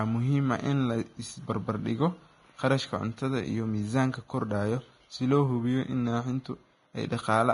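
From start to finish the speech carries heavy damage that's most likely Vorbis compression. Nothing comes through above about 10.6 kHz, and the treble that's left is quantised so coarsely that its detail turns into hiss of roughly the same energy. You hear it as a grainy, hissy sheen, roughened tones, and softened, smeared attacks on consonants. The amount of damage points to a low bitrate, somewhere around 30 kbps.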